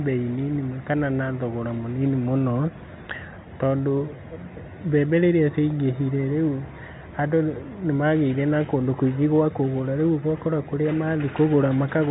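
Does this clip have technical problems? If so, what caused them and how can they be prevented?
No, there is nothing to fix: the speech runs through G.711 mu-law telephone coding at 64 kbps, and the absence of anything above 3.9 kHz is simply how that path behaves.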